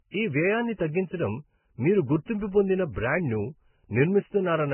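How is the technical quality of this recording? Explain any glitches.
The technical quality is poor, with one fault running through the whole clip. Transcoding between lossy codecs, from start to finish: the speech was likely encoded first at a very low bitrate and then re-encoded, consistent with a Vorbis-then-AAC-LC chain. The chain left nothing above 3 kHz, and the second pass spent its bits on the existing artefacts and added its own, leaving dull, muffled speech with the artefacts of both codecs heard together.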